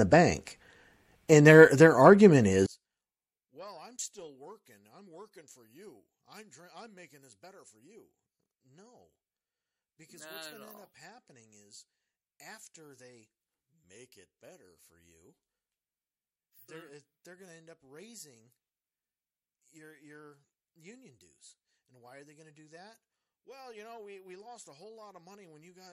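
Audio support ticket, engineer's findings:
From 2.66 s, after "and their their argument", to end: speech drops about 35 dB to a faint residue. Likely one channel inverted, so the mono sum cancels the common centre. Unlike a dropout or gain fault, a faint copy of the channel mismatch remains.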